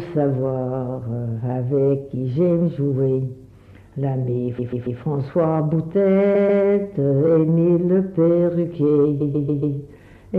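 Repeated frames occur three times: at 4.58 s a 139 ms block plays three extra times, at 6.34 s twice more, and at 9.20 s four more times, lengthening the audio by about 0.42, 0.28 and 0.56 s. The same short slice of compressed data reached the decoder repeatedly, giving a mechanical stutter. Unlike a dropout, nothing is lost, and the fixed 139 ms period, which fits a block of several codec frames, sets it apart from random jitter.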